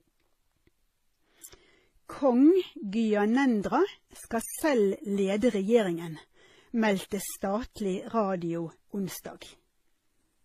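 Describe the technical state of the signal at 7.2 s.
At 7.2 s, as across the whole clip, the speech likely went through transcoding between lossy codecs. Its mix of different codec artefacts heard together fits low-rate MP3 and HE-AAC stages re-encoded by WMA, each adding artefacts to the last, with nothing above 14.9 kHz.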